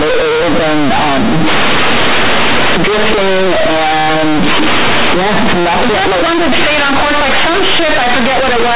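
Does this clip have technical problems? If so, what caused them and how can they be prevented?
Yes. Throughout the speech, companded audio is read as linear: mu-law bytes play as plain 8-bit samples without expansion. Each sign change swings across half the range, giving loud buzzy distortion. The waveform stays large even in pauses, and the spectrogram shows broadband noise. Decode mu-law to linear PCM before playback.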